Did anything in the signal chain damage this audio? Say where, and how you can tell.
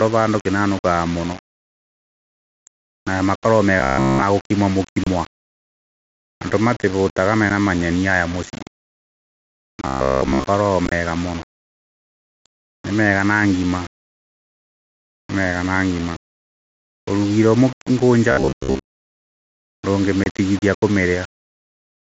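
Yes. At the sample-format conversion stage, the whole recording shows low bit depth without dither. A grainy distortion tracks the speech and changes with it, sitting roughly 20 dB below the signal. It likely comes from rounding to about 5 bits with no dither, so the error follows the waveform instead of forming steady hiss.

At the driver or buffer stage, there is robotic sound from repeated short buffers at 3.80–4.23 s, 9.87–10.44 s and 18.31–19.00 s. The speech turns into a rigid metallic buzz at 66.7 Hz, which fits a roughly 15 ms block being replayed. That block likely fills the whole first span and most of the other two.

On the Bluetooth link, there is unconcealed Bluetooth headset packet loss. Abrupt holes appear at 5.04 s (30 ms), 7.50 s (7.5 ms) and 20.24 s (22.5 ms). At 10.86–10.92 s, 45 ms of loss is scattered across 60 ms, which gives a brief chopped crackle. In every case, silence or an idle pattern replaces audio with hard edges.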